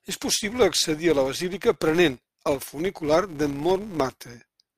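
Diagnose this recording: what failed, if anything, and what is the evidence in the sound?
A filter restarted on every block is the fault, in the processing stage. A steady buzz at about 172 Hz runs through the whole speech clip. It rises and falls with the level of the speech and drops back in quieter stretches. That rate fits a 256-sample block. The filter is losing its stored state at each block boundary. Each block starts again from silence, so every boundary throws a small transient. Those repeating ticks fuse into the buzz.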